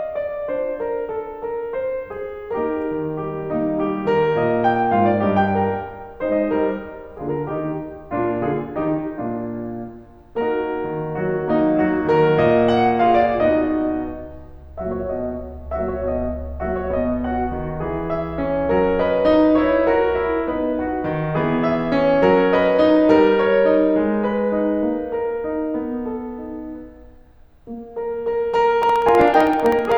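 Periodic USB or driver dropouts, 28.83 to 29.92 s: the bus stalls every 64 ms, dropping about a millisecond to silence, heard as steady ticks.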